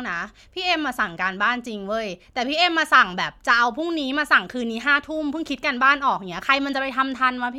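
No audible technical faults.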